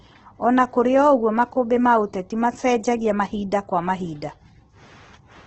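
Across the whole clip the speech is band-limited, with nothing above about 8.3 kHz, and heavily coloured by Opus compression. Consonants and vowels come through rough and grainy, as though noise were filling in where detail should be, rather than swirling or leaving holes. The cause is likely the Opus encoder in its music mode working at a very low rate, around 12 kbps, where bands are rebuilt by folding or noise fill instead of being coded exactly.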